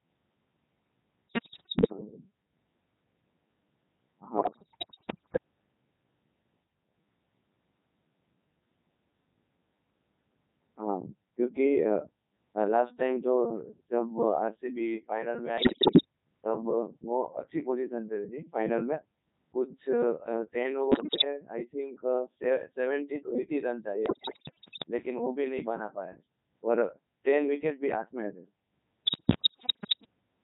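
The whole thing runs through a Codec 2 vocoder at 3.2 kbit/s, and it shows heavily. Codec 2 doesn't keep the waveform at all. It sends pitch, voicing, energy and a rough spectral envelope, then rebuilds the speech from sine waves at the far end. So the speech comes out robotic and buzzy from start to finish, with that synthetic edge you get when only a model of the voice survives.

On top of that there are six bursts of bit errors on digital voice radio: 1.29 to 1.92 s, 4.38 to 5.38 s, 15.58 to 16.05 s, 20.92 to 21.24 s, 24.06 to 24.84 s and 29.06 to 30.06 s. They sound like somewhere around one bit in ten going wrong, closer to one in seven in the two bursts at 20.92 s and 24.06 s. At a bitrate this low, a flipped bit corrupts a whole frame's pitch, level, voicing or spectrum. That's why the speech lurches in pitch and loudness and breaks into warbles, bleeps and garbled robotic babble in each burst.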